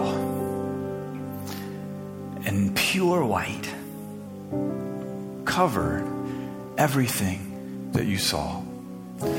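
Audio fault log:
3.11–4.27 s drift correction step: a clock-matching stage likely raised the playback rate 5.69% in one jump, so speed and pitch rise together, about 96 cents sharp, then snap back.
7.92–9.38 s drift correction step: a clock-matching stage likely cut the playback rate 5.69% in one jump, slowing the sound and dropping pitch 101 cents flat through to the end.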